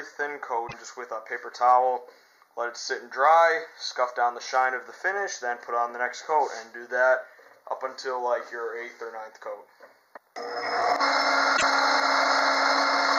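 Right at the start, from 0.64 to 0.74 s, there's a short burst of damaged data in the compressed stream: a stretch of bytes got mangled, so the decoder misreads those frames, loses sync and has to hunt for the next valid frame header. You hear it as a brief glitch about a tenth of a second long. The same thing happens again from 11.53 to 11.63 s, with another quick glitch of similar length.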